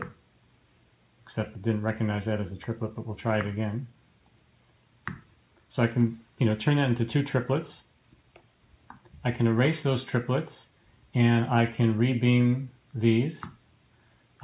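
Nothing is technically wrong with this audio.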